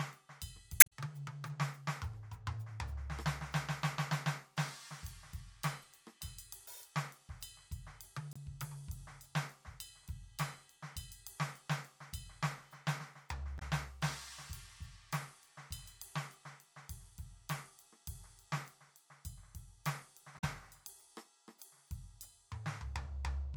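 Right near the start of the music, at 0.77 to 0.92 s, there's a short glitch, and it comes back as briefer blips at 5.82 to 5.85 s, 8.33 to 8.37 s, 13.55 to 13.62 s and 20.35 to 20.44 s. That's damaged data in the compressed stream. Bad bytes land in the encoded frames, the decoder misreads them and loses its place, then hunts for the next valid frame header. That is where each glitch comes from.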